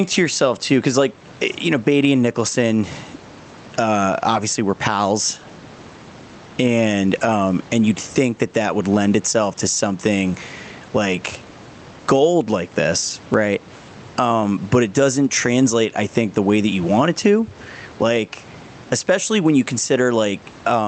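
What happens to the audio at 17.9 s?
At 17.9 s you're hearing gain pumping, which runs through the whole clip: the gain swings by about 15 dB, pulling loud and soft parts closer in level and squashing the sound, likely from a fast limiter fighting excessive mic gain.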